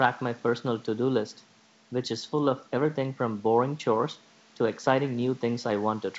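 Speech with room noise about 32 dB below it and wideband telephone-style coding audible up to about 7 kHz; nothing technically wrong.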